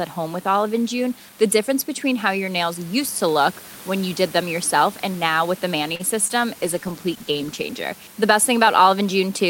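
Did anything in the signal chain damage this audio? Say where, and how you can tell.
Yes. At 5.95 to 6.02 s there is a short stall from a late packet, at the network and jitter buffer stage. The buffer ran dry and the receiver held the last sound for about 41 ms, then resumed where it stopped. On a spectrogram the harmonics run flat for that span, with a slight buzz or a small level dip.

At 6.28 to 6.31 s there is a short concealed packet loss, also network-side. About 20 ms never reached the decoder, and concealment extrapolated roughly 18 ms before cross-fading back. The spectrogram shows a brief smeared patch where fine detail goes blurry, and the waveform shows a wobble.

From 6.62 to 7.93 s there is a call bitrate drop at the codec stage, driven by the call's bandwidth estimate. The encoder fell from 64 to 18 kbps and sat at the floor for about 1.24 s. The audio turns coarse and muffled, and the spectrogram shows the upper band cut off abruptly with blotchy, quantised texture below. 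Steady room noise, about 21 dB under the speech, stays visible as a faint floor throughout.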